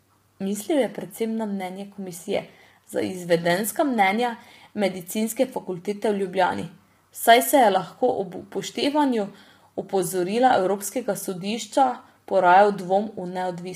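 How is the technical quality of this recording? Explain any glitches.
The technical quality is poor because of heavy compression damage throughout.

Low-delay AAC compression, throughout: the likely cause is AAC-ELD at a bitrate around 24 kbps, whose short frames blur harmonics, leaving the speech rough and grainy with a synthetic-sounding top band.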